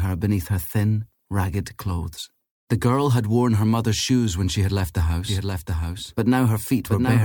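From 5.28 s to the end, the sound gains a hard-edged, undecayed second copy trailing roughly 0.7 s behind and a few decibels quieter: a doubled audio track, likely a second capture path or misaligned edit.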